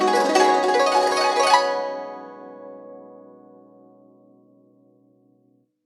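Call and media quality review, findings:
No technical faults were found in the music signal.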